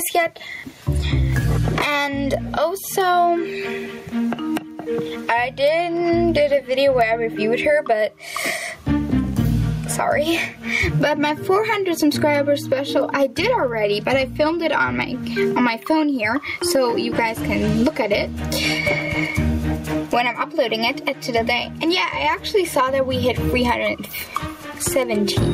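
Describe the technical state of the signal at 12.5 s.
At 12.5 s loud and soft parts sit closer in level, with levels squashed together. This gain pumping runs through the whole clip, swinging by around 20 dB, likely from gain set far too high and a fast limiter clamping down on every peak.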